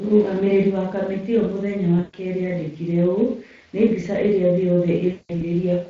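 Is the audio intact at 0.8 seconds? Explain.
No. Speex codec damage runs through the whole clip, so at 0.8 s the speech sounds noisy and hoarse. The sparse CELP excitation, which fits a bitrate near 20 kbps, shows on a spectrogram as smeared, fuzzy harmonics.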